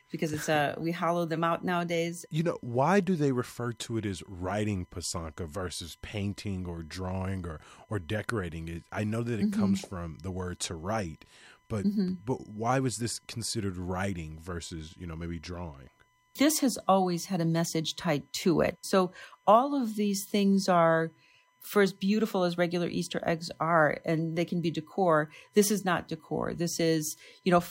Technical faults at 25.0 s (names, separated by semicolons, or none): USB whine